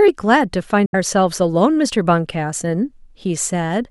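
Packets likely failed to reach the headphones in time, a Bluetooth dropout: from 0.86 to 0.95 s the speech cuts to silence, then resumes further along, as though it kept playing.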